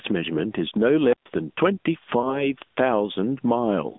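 Across the whole clip, gain pumping is audible: the level swings by about 15 dB, squashing the speech. The likely cause is gain set far too high, with a fast limiter clamping every peak.

The speech also passes through the AMR narrowband mobile codec. Its vocal-tract model, fed by sparse pulses, leaves the voice buzzy and synthetic, which fits a bitrate near 10 kbps. The line band is only about 200 Hz to 3.6 kHz, so everything above sounds cut off. The call's own microphone processing trims only the deepest bass.

From 1.11 to 1.28 s, an intermittent contact drops the sound. A loose connection opens for about 0.13 s, so the audio cuts out with crackle at both edges and only faint hiss remains in between.

From 2.22 to 2.49 s, there are lost AMR speech frames. A single 20 ms frame failed its checksum, and the decoder patched it from the previous frame at reduced gain. The result is a brief dip or warble, then a weak or rough recovery.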